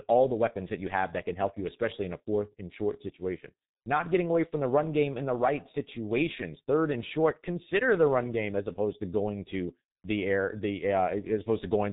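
From start to finish the speech carries heavy G.723.1 codec damage. Nothing passes above 3.8 kHz, and the slow 30 ms frame updates leave it muffled and hoarse with smeared consonants, consistent with a rate near 6.3 kbit/s. A spectrogram shows a flat ceiling at 3.8 kHz and blocky, blurred harmonics.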